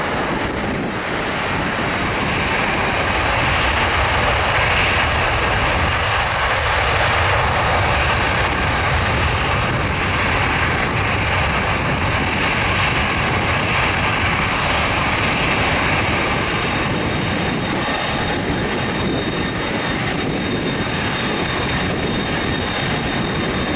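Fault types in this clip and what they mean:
No faults heard here.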